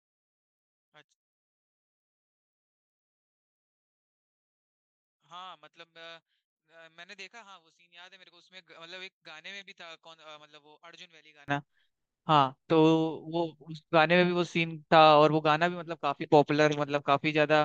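Speech clip, and from 0.0 to 11.48 s it drops to a faint trace, about 27 dB down when summed to mono. The likely culprit is one channel inverted: the shared centre content cancels itself out and leaves only the difference between the channels.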